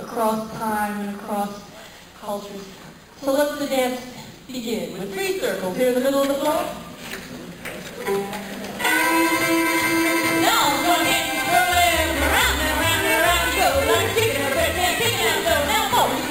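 Throughout, imaging from sample-and-hold upsampling adds a metallic fizz between 5.5 and 11 kHz, about 12 dB below the sound. It fits audio at 11 kHz raised to 48 kHz by repeating samples. Unlike hiss, it vanishes in silence.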